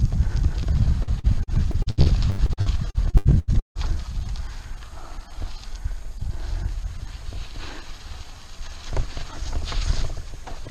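From 1.03 to 3.78 s the sound turns choppy, with a rapid string of brief holes, the longest about 158 ms. This is repeated packet loss (robotic sound): data kept going missing, and each gap was patched by extending the previous sound, leaving roughly a third of the stretch synthetic.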